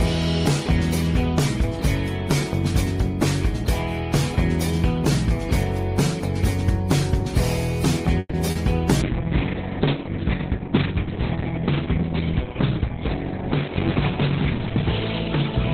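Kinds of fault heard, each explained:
Call audio freeze: from 8.19 to 8.35 s the sound stalls, the last moment stretched into a fading buzz for about 140 ms, with roughly 20 ms of near-silence at its end. The likely cause is packets held up in transit until the jitter buffer emptied, so the receiver improvised until they arrived. The audio then resumes where it paused, nothing lost, but everything after sits about 140 ms later than before.
Short concealed packet loss: at 8.51 to 8.57 s a brief smear appears, about 40 ms long, where that slice of audio never reached the decoder in time. The receiver extrapolated from the preceding sound to plug the hole, then crossfaded back into the real signal. Unlike the freeze just before it, this gap replaces genuine audio, so those 40 ms are missing, heard as a quick wobble rather than a pause.
Call bitrate drop: from 9.03 s to the end the sound turns coarse and muffled as the encoder's budget falls from 32 kbps to 6 kbps after the connection's bandwidth estimate collapsed. 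At that rate Opus quantises far more roughly, producing a watery, gritty texture, and narrows the audio band from 20 kHz to about 4 kHz, stripping away brightness. The lowest setting holds for roughly five and a half seconds, with no recovery before the clip ends.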